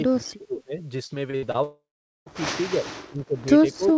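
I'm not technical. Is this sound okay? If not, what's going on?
No. The voice sinks sharply from 0.05 to 0.82 s, briefly at 2.74 to 2.86 s, and from 3.08 s to the end: speech suppressed in double talk, likely because the echo canceller mistook overlapping talk for echo and turned it down.

From 1.07 to 1.57 s, repeated packet loss (robotic sound) makes the voice choppy, with four short holes patched over, none longer than about 60 milliseconds.

From 1.63 to 2.29 s, a long network dropout takes over: a fading buzz or hiss, then nearly half a second of silence, and the audio resumes with that part simply gone.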